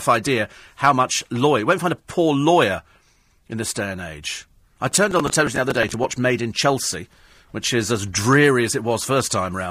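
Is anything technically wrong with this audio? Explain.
Yes. From 4.92 to 6.04 s there is processor overload crackle: the processor falls behind and repeatedly misses the deadline for short buffers, roughly 5 ms each, around twenty times over that second. Each miss is filled by replaying a scrap of stale audio, spliced in with hard edges. Heard on the speech, the stacked discontinuities form a gritty, tearing crackle riding over the voice, which clears once the load eases.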